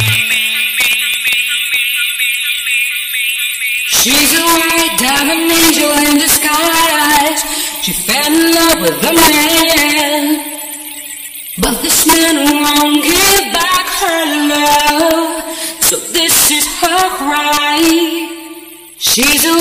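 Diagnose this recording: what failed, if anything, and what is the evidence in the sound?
Integer overflow runs through the whole recording, heard as violent cracks whenever the sound gets loud. The fault sits at the fixed-point gain or sample-format conversion stage: the signal was pushed about 9 dB past full scale, and instead of saturating, each sample beyond the integer limit wrapped around to the opposite extreme. Only around one percent of samples are affected, so the loudest peaks snap across the full range, far harsher than ordinary clipping.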